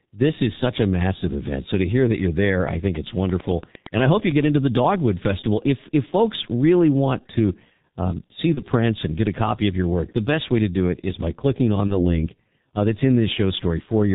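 G.723.1 codec damage runs through the whole speech clip, and it is heavy. Nothing above 4 kHz survives, so the voice sounds muffled, and the slowly updated vocal-tract model leaves it hoarse, with consonants smeared into one another. The coarse quantisation fits the codec's 6.3 kbit/s mode, with 30 ms frames too long to track rapid changes in articulation.

VoIP packet loss concealed by the speech codec occurs at 8.54 to 8.60 s and again at 11.87 to 12.19 s. Each event points to a single lost 30 ms frame. The decoder filled the gap by repeating its last pitch and filter settings at falling gain, so the sound briefly turns into a fading buzzy tone or coloured noise. The second event stays weak and distorted for about 0.3 s, because each decoded frame builds on the damaged one before it.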